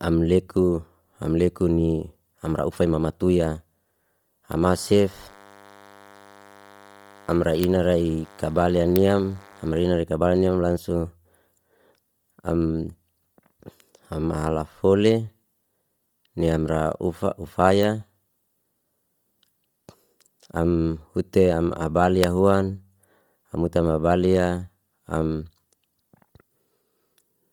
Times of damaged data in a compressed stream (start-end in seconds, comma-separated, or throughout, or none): none